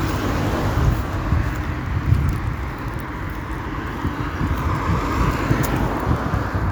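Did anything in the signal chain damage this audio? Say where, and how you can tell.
No, nothing in the signal chain damaged this audio.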